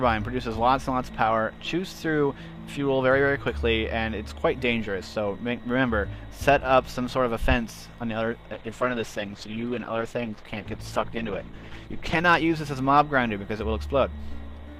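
From 8.54 to 12.31 s the audio turns coarse and muffled, a call bitrate drop consistent with the encoder falling from about 96 kbps to roughly 13 kbps before recovering.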